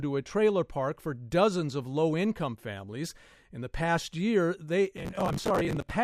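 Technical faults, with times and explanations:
4.97 to 5.91 s, processor overload crackle: for nearly a second the speech is overlaid with a dense, gritty tearing, then it clears abruptly. The processor is falling behind its audio deadlines repeatedly, and buffers that fit around 10 ms each are not refilled in time. Each missed one is filled with a repeat of stale audio that has hard edges at both ends. Several dozen of these small splices in quick succession merge into continuous crackle until the load drops.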